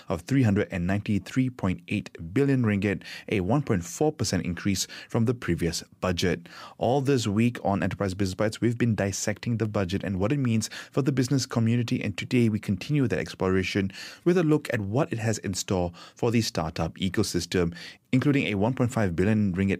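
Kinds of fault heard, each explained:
No faults can be heard anywhere in this speech.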